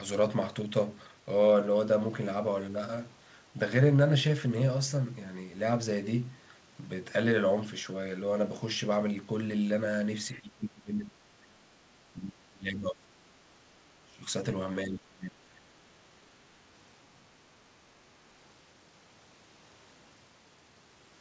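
From 10.33 to 11.67 s, 11.98 to 13.39 s, 13.95 to 14.29 s and 14.82 to 15.84 s, speech is suppressed in double talk, likely by an echo canceller muting the talker during overlap. The voice drops by up to about 30 dB, leaving deep notches in the waveform and faded gaps on a spectrogram that already stops at 8 kHz.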